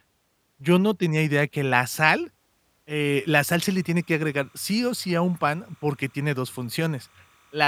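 From 3.01 s to the end, timecode bleed: linear timecode leaking from an adjacent line sits roughly 35 dB under the speech as a thin, steady chirping warble. Its rhythm fits 29.97 fps code. A spectrogram shows faint continuous bands near 1 kHz and 2 kHz.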